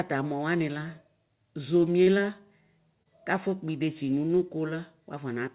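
A speech recording carried over a narrowband call line with nothing above 4 kHz, it has a brief smeared wobble from 3.03 to 3.08 s: short concealed packet loss, where about 30 ms of audio arrived too late and the receiver extended the preceding sound before blending back.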